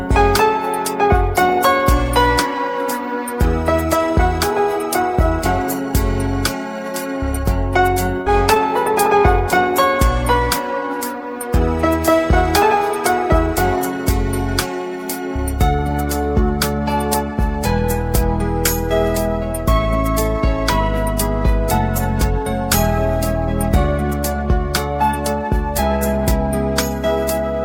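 At 8.21 s the sound briefly smears into a held, fading tone for about 47 ms, then jumps ahead at 8.28 s. This is a burst of packet loss. The receiver stretched and faded the last audio it had, and about 40 ms of material never arrived.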